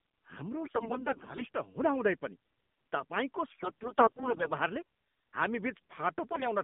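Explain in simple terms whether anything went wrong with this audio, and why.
Yes, the speech sounds thin, muffled and buzzy all the way through, with nothing above roughly 3.6 kHz. That is the AMR narrowband mobile codec, which squeezes speech into a tiny phone-call signal.

At 0.64 to 1.49 s, just after "पनि तपाईँको" at 3.50 to 4.52 s, and at 6.32 to 6.47 s, the speech turns hoarse, scratchy and gargly. These are AMR bit errors: a weak link corrupted parts of the coded frames.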